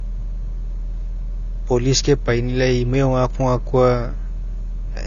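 Speech with AAC compression damage throughout: nothing above 6.9 kHz, and a smeared, warbling texture that fits a low bitrate around 24 kbps, likely AAC-LC.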